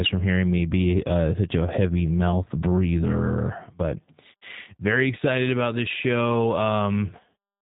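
Speech runs through the G.729 codec for its whole length. Nothing above about 3.8 kHz survives, so the sound is narrow and telephone-like. The codec rebuilds each short frame from a vocal tract filter, a pitch predictor and a few pulses. Here that leaves the speech intelligible but plainly rough and synthetic. The damage fits an 8 kbit/s G.729A stream. It is heard throughout, not at any single moment.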